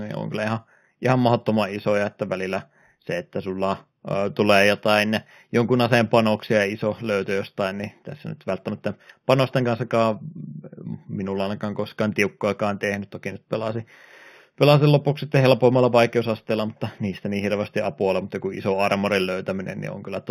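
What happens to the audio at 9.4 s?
The speech at 9.4 s carries imaging from linear upsampling, which runs through the whole recording. The audio was raised from an 8 kHz rate to 48 kHz by joining samples with straight lines, a weak interpolation filter. The band edge near 4 kHz is dulled, and a mirrored copy of the spectrum sits between 4 and 8 kHz, roughly 25 dB below the signal, giving sibilants a faint metallic shimmer.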